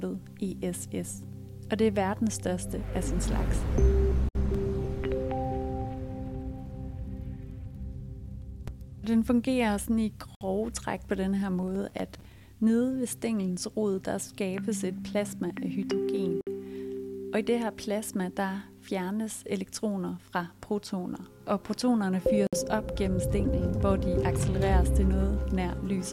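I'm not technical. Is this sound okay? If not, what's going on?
No. A gap at a join of encoded pieces occurs at 4.29, 10.35, 16.41 and 22.47 s, every 6 seconds, each a brief silence of about 60 ms. The audio seems to have been saved in separate chunks and stuck together untrimmed, leaving each chunk's built-in silence and end padding in place.

Processor overload crackle runs from 11.63 to 12.44 s as a gritty tearing over the sound. The computer fell behind and missed around thirty tiny deadlines over that stretch, which fits small chunks of about 5 ms, each time briefly replaying old audio with hard edges.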